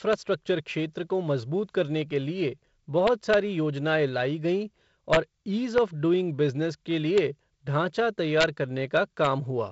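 Speech clip, carried over G.722 wideband coding that fits 48 kbit/s, with a faint upper-band hiss and nothing above 7.6 kHz. Integer overflow strikes at 0.13 s, before "क्षेत्र को मजबूत करने", then 3.07–3.34 s, 5.13–5.17 s after "योजनाएं लाई गईं", 5.78 s before "ऑफ़ डूइंग बिज़नेस के", 7.18 s, 8.41–8.44 s and 8.97–9.27 s. Loud peaks pass the integer limit by 0 to about 2 dB. They wrap to the opposite sign rather than being held, giving harsh cracks sharper than clipping.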